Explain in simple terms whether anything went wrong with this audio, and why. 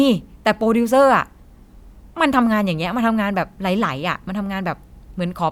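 Nothing went wrong with the recording: its level stays steady and the signal runs without any break, glitch or distortion.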